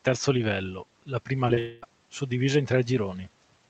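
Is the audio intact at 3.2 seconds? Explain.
Yes, the audio is intact at 3.2 seconds, with no fault at that moment.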